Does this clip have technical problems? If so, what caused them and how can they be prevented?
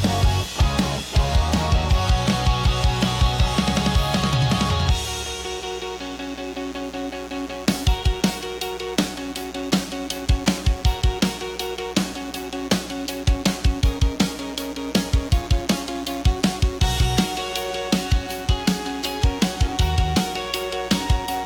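Yes, there's a mains buzz running through the whole clip, a raspy 60 Hz hum roughly 20 dB under the sound. Sharp switching spikes, twice per mains cycle, are leaking in and spraying harmonics up into the kilohertz range. Keep dimmers and rectifiers away from the rig and use properly shielded, grounded cabling.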